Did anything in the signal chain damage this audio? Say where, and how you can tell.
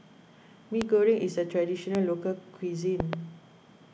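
Yes, there are three loud pops sitting on top of the speech: single ones at 0.82–0.84 s and 1.95–1.97 s, then a double pop between 3.00 and 3.15 s. Each jumps to something like 15 dB above the speech, which keeps going underneath. That sharp, brief thump is a voltage pulse added to the signal and shaped by the circuits after it, most likely in the analogue wiring, from a loose plug, a switch or static.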